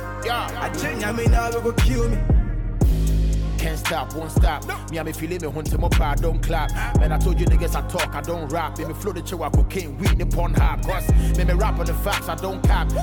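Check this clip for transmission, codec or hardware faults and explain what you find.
There is one fault, and it runs through the whole clip: mains hum at 50 Hz. A ground loop or a nearby transformer is letting the power line leak into the signal path, so the supply frequency rides along with the audio from start to finish. What you hear is a steady, low drone under everything, with some low harmonics above the fundamental. It sits only about 10 dB below the sound itself.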